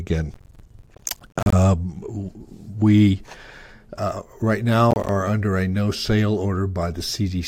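Twice the processor falls behind its deadlines for the roughly 10 ms audio buffers, producing processor overload crackle in the speech. From 0.34 to 1.53 s dozens of buffers are missed, each leaving a hard-edged gap of silence, so the sound tears into a dense, gritty crackle. A shorter spell from 4.91 to 5.09 s drops around ten buffers, a brief burst of the same crackle that stops once the load eases.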